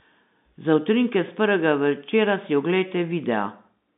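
Nothing is wrong technically with this bit of speech; it simply carries the sound of G.711 telephone coding, with the audio held to the narrow phone band of roughly 150 Hz to 3.7 kHz, which is how a normal phone line should sound.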